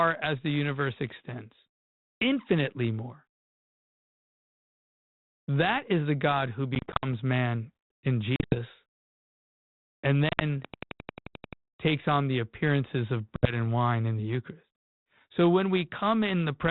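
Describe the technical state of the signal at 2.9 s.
At 2.9 s the speech is intact, carried through a G.726 ADPCM telephone path that leaves only its narrow band and a light coding grain.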